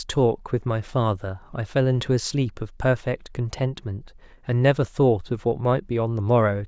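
Nothing in the recording stood out as a technical fault on listening.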